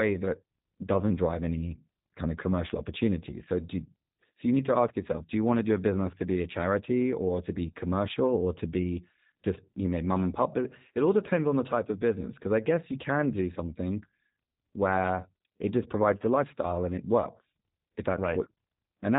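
Speech, carried from start to finish through the G.729 codec, and the coding damage is plainly audible. The sound is rebuilt from a vocal tract filter, a pitch predictor and a handful of pulses per 10 ms frame rather than from the waveform itself, which gives it a rough, synthetic texture that fits the 8 kbit/s rate of the G.729A variant. The band stops at 3.8 kHz, so nothing above that survives and the top end is absent throughout.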